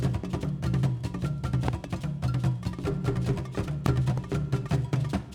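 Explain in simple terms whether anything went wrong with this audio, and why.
Two kinds of fault can be heard. The first is a loud pop: a double pop between 1.68 and 1.86 seconds, then a single one from 3.86 to 3.88 seconds. Each jumps out well above the surrounding sound, which keeps going underneath without a break. That continuity separates it from a data fault. The likely cause is a sudden electrical jolt, such as a plug, a switch or static, briefly added on top of the signal.

The second is damaged data in a compressed stream, a very short blip at 4.18 seconds. Here the audio itself stops making sense for an instant: the player hits a garbled stretch of the compressed file, loses its place and searches for the next point where it can read cleanly again. Unlike the pops, this is a brief glitch in the sound itself rather than a separate bang laid over sound that carries on.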